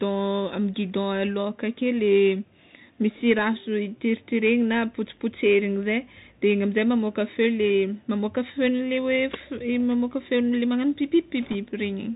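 A speech clip carried through a Bluetooth CVSD headset codec from start to end. Nothing above 4 kHz survives. The codec's one-bit steps are plainly audible as a granular hiss, and s sounds come out scratchy. This fits a 64 kbps CVSD link. From 11.43 to 11.56 s, bit errors on the Bluetooth voice link add a brief rushing crackle. There are no sharp clicks, because each flipped bit moves the signal only slightly. The sound points to around 2 percent of bits being corrupted.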